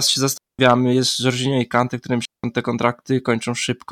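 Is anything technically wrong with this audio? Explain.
Yes. This speech clip has two digital wireless dropouts, at 0.38–0.59 s (about 0.21 s) and 2.25–2.44 s (about 0.18 s). Each time the receiver loses too much of the radio data stream and mutes with a very fast fade. You hear a clean hole of near silence with no noise burst either side. On a waveform it shows as a flat gap, and on a spectrogram as a blank vertical band across all frequencies.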